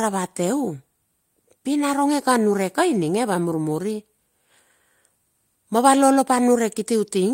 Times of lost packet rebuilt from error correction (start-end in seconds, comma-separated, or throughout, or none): 2.19-2.21